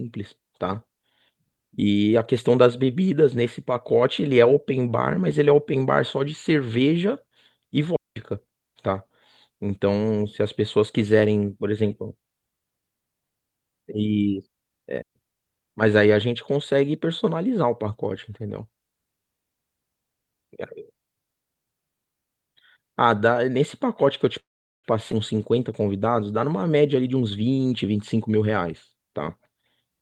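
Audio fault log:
7.96 to 8.16 s and 15.02 to 15.15 s, digital wireless dropout: the speech cuts to near silence for about 0.2 s and then 0.13 s, with very short fades at each edge. The receiver muted after losing too much data. Unlike a freeze, there is no fading buzz and no burst of noise at either side.
24.39 to 24.87 s, call audio freeze: the last sound carries on briefly as a fading buzz and then goes silent for about 0.42 s before the speech resumes where it stopped. Nothing is lost, but about 0.44 s of delay is added. The likely cause is packets held up until the jitter buffer ran empty.
25.12 s, skip ahead: the speech jumps forward with almost no gap, and the two sides are joined nearly directly. Roughly a fifth of a second of audio is missing, dropped while later audio was already waiting. This differs from a dropout because there is no silent hole, only a missing piece.
26.69 to 28.62 s, jitter buffer speed-up: the speech runs about 13% faster at unchanged pitch and sounds hurried. 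Short pitch-period pieces, around 0.3 s in total, were trimmed repeatedly to reduce excess buffered delay. Unlike a skip, no single chunk disappears.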